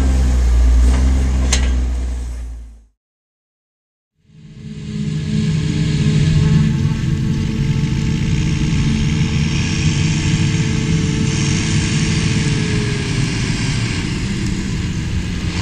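No technical faults can be heard anywhere in this recording; the signal stays continuous and steady throughout, with no breaks, distortion or disturbances.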